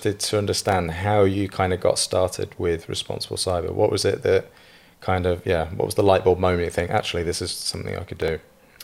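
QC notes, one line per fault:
0.59–0.72 s and 7.62–8.43 s: processor overload crackle. A handful of very short buffers, around a millisecond or two each, miss their deadlines and replay stale audio with hard edges. The result is a gritty tearing over the speech rather than one isolated click or a silent dropout.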